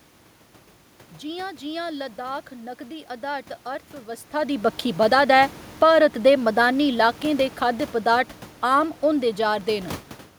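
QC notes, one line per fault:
4.98–9.95 s, automatic gain falling: starting just after "अधारत अर्थव्यवस्था दी बक्खी", the level sinks steadily by about 6 dB over five seconds. The gain control judged the input too loud or its background noise too strong and backed off slowly, so the room noise beneath the speech drops along with it, a sign this is gain riding rather than the talker moving.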